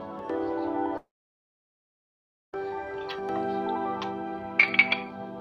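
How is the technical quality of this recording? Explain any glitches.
The recording has one clear glitch. From 0.97 to 2.56 s, the sound smears into a brief fading buzz, then drops to silence for about 1.5 s, likely a long network dropout. Roughly 1.6 s of audio never arrived, and playback resumes past the lost section.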